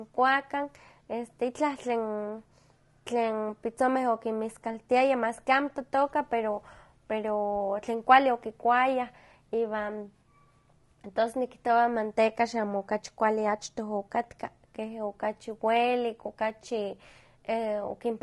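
From start to finish the speech sounds rough and grainy, with noise between harmonics, likely low-delay AAC compression working at a bitrate around 32 kbps.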